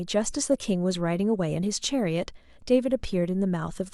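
No faults are audible in this speech recording, which runs without any dropout, glitch, distortion or timing error.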